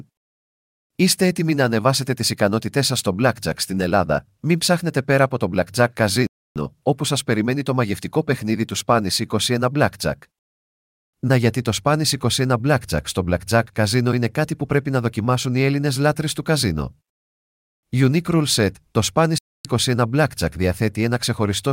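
A speech clip with two Bluetooth stalls, likely caused by delayed wireless packets letting the headphone buffer run empty. The audio cuts to silence from 6.27 to 6.56 s, resuming on "όπου σας περιμένει το", and again from 19.38 to 19.65 s.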